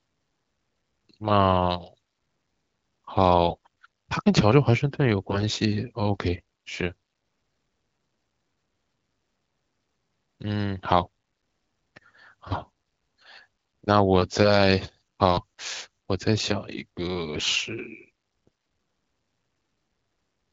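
AMR bit errors hit at 3.50 to 3.56 s, 5.29 to 5.43 s and 17.34 to 17.50 s. Flipped low-priority bits misplace excitation pulses and skew gain, so the speech turns hoarse and gargly at its usual pitch and level.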